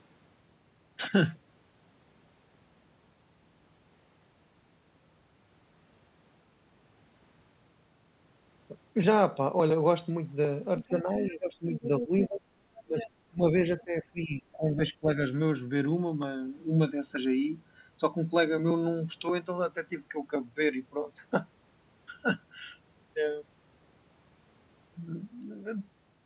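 A speech clip with two overlapping problems between about 10.8 and 15.1 s. The first is the other side's voice leaking through: a second, fainter voice appears at 10.79–11.28 s (about 15 dB below the talker), at 11.75–12.27 s (about 10 dB below), briefly at 12.99–13.06 s, and as a barely audible flick at 13.79–13.83 s (about 30 dB down). This is likely residual loudspeaker echo that the echo canceller failed to remove. On a spectrogram it shows as a separate harmonic pattern layered over the talker's, and all of it stops at the 4 kHz band edge of the narrowband call path. The second is speech suppressed in double talk: from 10.87 to 12.46 s and from 12.85 to 15.1 s the talker's level repeatedly falls, by as much as about 20 dB, for roughly a second and then roughly one and a half seconds in total. The likely cause is the canceller muting its own talker while the far end was also speaking. 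On the waveform these appear as abrupt notches in the envelope, and on the spectrogram as gaps or faded patches in the talker's harmonics.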